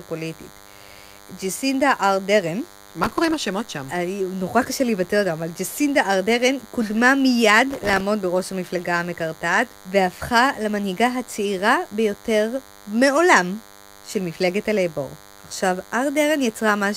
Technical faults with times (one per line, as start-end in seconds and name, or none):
0.00-16.97 DECT cordless phone buzz
3.03-3.34 processor overload crackle
7.71-8.00 processor overload crackle